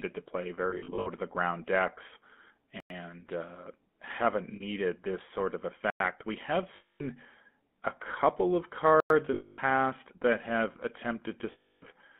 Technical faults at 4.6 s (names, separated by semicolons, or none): GSM full-rate codec; lost GSM frames